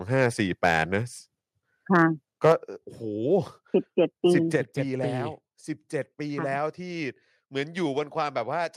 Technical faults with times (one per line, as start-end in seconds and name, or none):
0.21-0.27 microphone overload
0.64-0.82 microphone overload
1.95-2.02 microphone overload
2.44-2.52 microphone overload
2.52 microphone volume stepped down
4.56 microphone volume stepped down